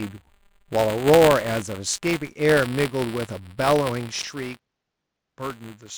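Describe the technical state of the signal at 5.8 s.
At 5.8 s two problems overlap. First is buffer tearing, which runs through the whole speech clip. The writer and the hardware reader of the ring buffer have drifted until they cross inside every period, so a small slice of each buffer, a few percent, still holds audio from about 20 ms earlier, with hard joins on both sides. You hear it as a steady 200 Hz robotic buzz riding on the speech, present only while there's signal.

Second, from 4.22 s to the end the sound has gone duller and boxier. It's most likely an input switched to a poorer device partway through. At the changeover there's a brief 20 ms dropout, and after it the band is narrower. The level drops by about 5 dB, and there's a new noise floor sitting well down, roughly 55 dB under the signal. So at 5.8 s you're hearing that narrower, quieter input with the tearing buzz still on top.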